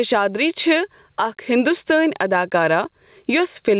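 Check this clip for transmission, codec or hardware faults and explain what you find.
One fault runs through the whole speech clip, heard over a narrowband call path with nothing above 4 kHz.

Gain pumping, throughout: input gain likely set far too high, with a fast limiter clamping each loud syllable. The gain swings by around 15 dB, so levels sound squashed.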